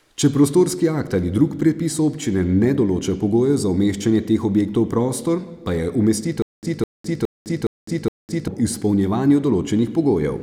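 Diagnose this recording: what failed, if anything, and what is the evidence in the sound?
Stutter with silent gaps from 6.42 to 8.48 s, likely a playback or stream buffer stall. A 208 ms fragment repeats five times, each followed by about 207 ms of digital silence (415 ms period). The waveform shows identical blocks separated by flat silent stretches, and the spectrogram shows matching stripes with blank columns between.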